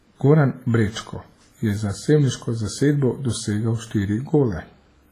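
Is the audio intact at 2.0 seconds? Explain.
No. At 2.0 seconds, as throughout the speech, there is a ringing, washy smear with hiss that swells and fades with the signal, and nothing above 15.4 kHz. This is likely WMA compression at a low bitrate, around 24 kbps, where long transform blocks spread quantisation noise over tens of milliseconds and weak components are zeroed.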